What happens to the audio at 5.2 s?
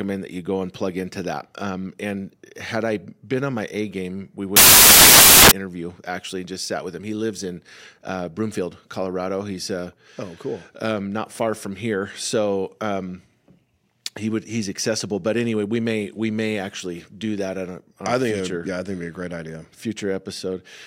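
At 5.2 s the speech is inside a burst of samples built from the wrong bytes, running from 4.57 to 5.51 s, just after "game we". Each sample's bytes are combined wrongly. The low bits take over. It sounds like loud, harsh broadband noise.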